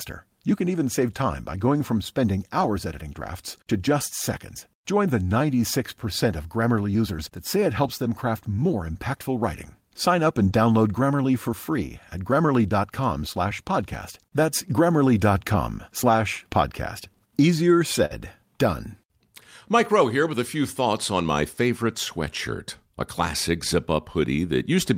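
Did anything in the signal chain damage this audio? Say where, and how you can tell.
Yes. Network loss, patched by Opus in-band FEC. Rougher, noisier lost packets rebuilt from error correction at 2.61–2.67, 7.83–7.89, 10.51–10.53, 15.47–15.53 and 18.11–18.13 s, played from low-bitrate copies.

A burst of packet loss at 18.05–18.13 s. The decoder stretched and faded the last sound for about 50 ms, then resumed with roughly 40 ms missing.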